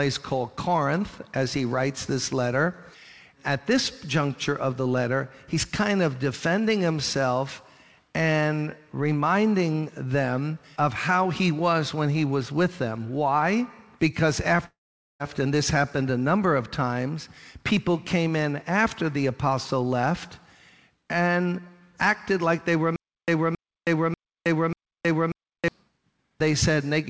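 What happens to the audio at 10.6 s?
Nothing goes wrong at 10.6 s: the audio runs through intact, with only the steady band limit of the call path, which leaves nothing above 8 kHz.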